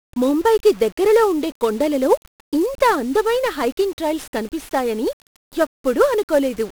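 From start to finish the speech is fuzzy and crackly, treble buried in hiss: heavy 1-bit DFPWM compression, each sample nudging an adaptive level, consistent with about 48 kbps.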